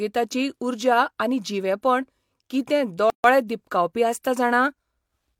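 From 3.10 to 3.24 s, between "उर्जा आनी जिवेपण कितें" and "दिपकावपी आसता", a gap at a join of encoded pieces inserts 141 ms of untrimmed encoder padding. This leaves an abrupt silence with smeared edges before the speech resumes where it stopped.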